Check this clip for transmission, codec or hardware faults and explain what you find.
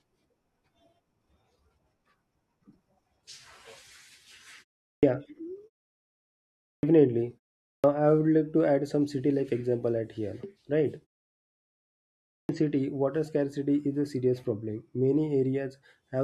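The clip has one fault, a clipped start after a pause, at 4.90, 6.70, 7.71 and 12.36 s, just before "city water scarcity is". The output device sleeps during silence, and on waking it swallows about 130 ms of speech, so words burst in without their first sounds. Muted pauses differ because they drop only background noise; here actual speech is lost.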